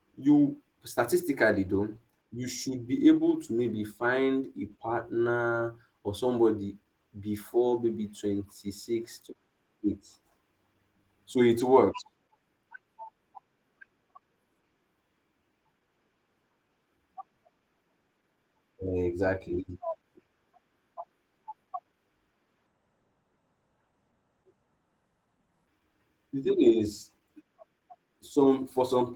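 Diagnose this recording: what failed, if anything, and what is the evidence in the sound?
Codec stage: Opus voice compression throughout leaves the speech muffled, hoarse and faintly robotic from coarse excitation coding, which fits hybrid mode at roughly 16 kbps.

Playback or editing stage: from 22.67 to 25.67 s a section runs at the wrong speed, 0.563 times normal and roughly ten semitones lower, likely from a clock mismatch.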